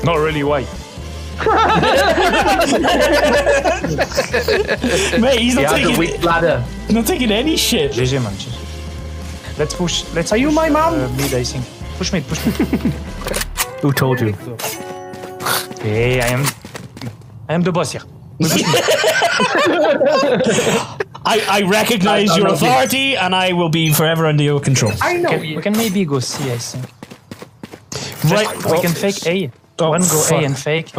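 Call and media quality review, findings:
Call and media quality review findings: no faults heard in this audio.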